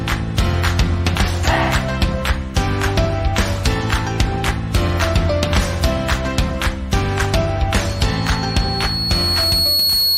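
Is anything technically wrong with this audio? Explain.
Yes. From 7.86 s to the end there is loudspeaker feedback squeal. A microphone is picking up the loudspeaker it feeds, and at 4.3 kHz the loop gain exceeds one, so that tone reinforces itself on each pass. It swells over about two seconds into a piercing whistle roughly as loud as the wanted sound. On a spectrogram it appears as a single horizontal line at 4.3 kHz that grows steadily brighter, and the waveform envelope visibly thickens as it builds.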